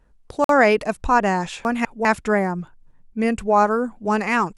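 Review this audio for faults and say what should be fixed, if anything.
Bluetooth stall at 0.44 to 0.49 s: the speech cuts to 50 ms of silence, then carries on. Interference likely delayed packets, so the headphone buffer ran dry until resent data arrived. A deeper playback buffer or a cleaner radio channel would prevent it.

Chunks out of order between 1.65 and 2.05 s: a 200 ms block of speech plays one chunk late, after the block that should follow it, producing a jumbled moment. Sequence-numbering chunks and reordering them before writing would prevent it.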